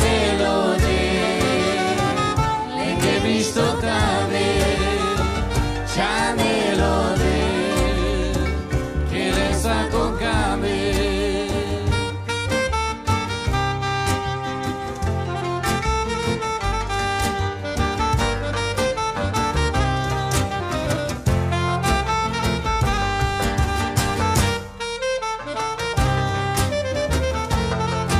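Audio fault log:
No faults were found in the clip. Nothing in it calls for a timed entry.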